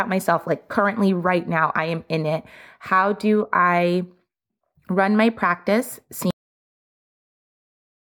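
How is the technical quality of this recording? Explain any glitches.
The recording has one clear fault: a cut-off end. At 6.31 s, just after "run my practice", the speech stops abruptly in the middle of a sound and the clip sits in digital silence until it ends at about 8 s. The final stretch of audio was never written out, so there is no natural decay or room tail. On a waveform the signal drops straight to a flat line; a spectrogram shows energy ending along a sharp vertical edge, followed by blank space.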